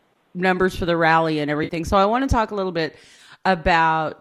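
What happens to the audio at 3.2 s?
Right after "talk a little bit", from about 3.16 to 3.19 s, there's AAC frame loss with concealment: roughly 20 ms of data, which fits two short frames from likely low-delay AAC compression, went missing, and the decoder patched it from the last good spectrum, leaving a brief smeared, noisy blip.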